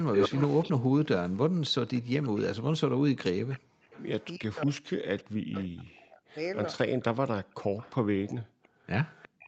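From 0.0 to 2.0 s there is Wi-Fi interference: beacon bursts picked up and rectified by the audio circuit tick steadily every 102.4 ms, about 30 dB below the signal. Echo leak begins at 0.13 s. A copy of the speech, delayed by 361 ms, returns at roughly equal level until 0.72 s. It comes back fainter, about 20 to 30 dB down, at 2.23 to 2.41 s, 3.5 to 4.8 s, 6.65 to 7.04 s and from 7.78 s to the end. It is likely loudspeaker sound that an echo canceller failed to remove. At 3.6 to 3.82 s and again at 8.43 to 8.85 s, the background is gated by the echo canceller, dropping by about 40 dB before recovering. From 4.37 to 7.76 s, speech is suppressed in double talk. It dips in pieces, by up to about 40 dB and for roughly two seconds in total, likely because the canceller turned the talker down along with the echo.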